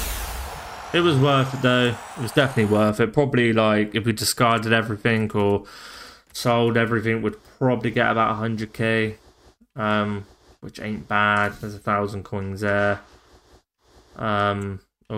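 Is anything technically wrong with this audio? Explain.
No, nothing technically wrong turns up here, so this one's fine as far as faults go.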